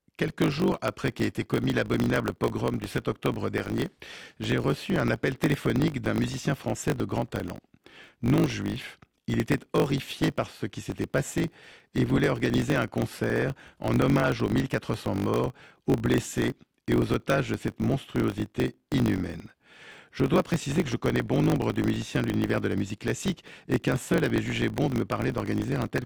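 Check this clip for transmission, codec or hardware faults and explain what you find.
One fault runs through the entire speech clip: a block size mismatch with truncation. One stage writes audio in longer blocks than the next stage reads, so the tail of every block is discarded. The repeated discontinuities produce a steady 50 Hz buzz, which fits blocks of around 1024 samples being cut short. Because a slice of each block is lost, the speech plays about 1.07 times faster than it should, while its timbre stays the same.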